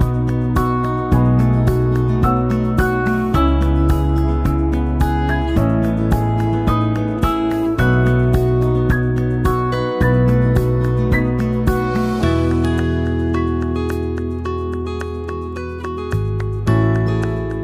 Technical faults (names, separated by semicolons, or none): none